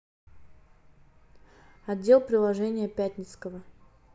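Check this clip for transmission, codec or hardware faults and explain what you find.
Nothing in this speech recording points to a transmission, codec or hardware problem: the signal holds continuous and steady throughout, with no audible break or disturbance.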